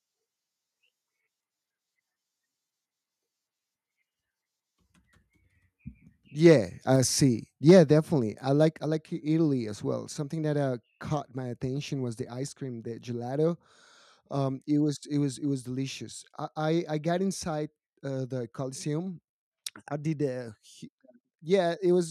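At 6.46 to 6.53 s and again at 7.69 to 7.79 s, the loudest peaks of the speech crackle harshly. This is microphone overload, likely from input volume set about 2 and about 3 dB too high. A few percent of samples are flattened at the converter's limit. Unlike codec distortion, it appears only on peaks.

At 7.71 s, during the second overload, the voice and background both drop by about 2 dB in a single step. This is the microphone volume stepped down, likely by call software reacting to the clipping. A gradual gain ride would fade; this step is abrupt.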